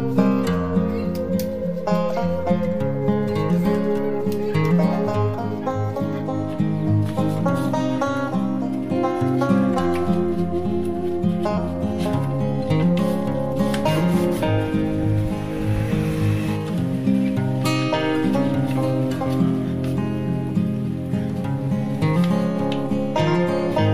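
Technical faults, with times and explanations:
Nothing technical stands out here; I couldn't pick out any problem anywhere in the recording.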